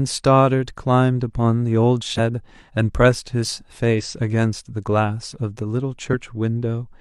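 Compressed frames were skipped three times in this speech clip, at 2.14–2.20 s, 3.95–4.01 s and 6.09–6.11 s, as the decoder dropped missing or damaged frames. Each time the speech jumps ahead by about 50 ms.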